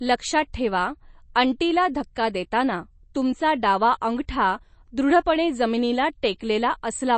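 Throughout the speech the treble stops dead near 8.3 kHz, and the remaining sound has a plainly audible watery, swirling texture with chirpy s sounds, likely from MP3 compression at a low bitrate, which fits roughly 32 kbps. A simple low-pass filter would only dull the sound without that flickering, metallic churn.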